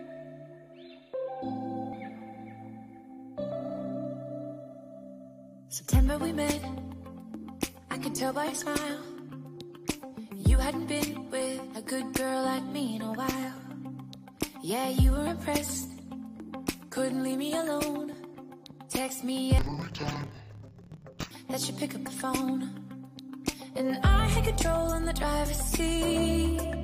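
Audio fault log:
19.59–21.31 s, interleaved audio read as planar: for this stretch the stereo stream's alternating left and right samples were unpacked as if each block held all of one channel and then all of the other, so each output channel gets half a block of mixed samples stretched to full length. Both halves run at half speed, which drops the sound an octave (12 semitones) while keeping the overall pace, and the 26.12 ms blocks restart at about 38.3 Hz, adding a doubled, choppy flutter.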